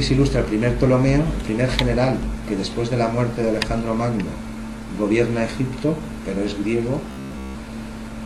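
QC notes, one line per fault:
throughout, DECT cordless phone buzz: steady, thin 100 Hz buzz rich in harmonics, about 30 dB below the audio, from rectified 10 ms radio bursts of a nearby DECT unit.
7.11 to 7.56 s, robotic sound from repeated short buffers: sound turns rigid and metallic with an imposed 66.7 Hz buzz, likely from late audio covered by repeating 15 ms chunks, replacing most of it.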